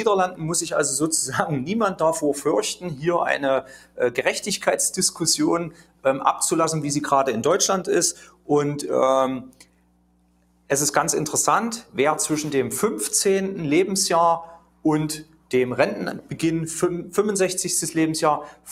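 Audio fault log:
Throughout: mains hum. A steady 60 Hz tone with low harmonics sits about 20 dB below the programme. Power-line current has coupled into the signal path through a ground loop or a nearby transformer, so the buzz stays put regardless of what plays.
Throughout: noise suppressor applied to music or sounds. A speech-oriented noise suppressor treats sustained tones and ambience as noise and pulls them down. Attacks pass while held parts sink, giving a pumping, thinned texture with level swinging by roughly 5 dB.
2.76–3.03, 3.62–4.0, 5.69–6.05, 8.13–8.49, 9.49–10.69, 14.58–14.85, 15.24–15.5, 18.52–18.67 s: sound cut by the noise suppressor. In each span the suppressor judged the material to be noise and ducked it by about 11 to 12 dB, clipping sustains and decays. The longest span, near 9.5 to 10.7 s, loses about a second.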